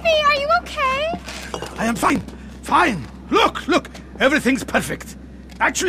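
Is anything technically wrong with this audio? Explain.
Yes. From 2.02 to 2.23 s there is processor overload crackle. Around twenty buffers of roughly 10 ms each miss their deadline and are skipped, producing a burst of gritty tearing.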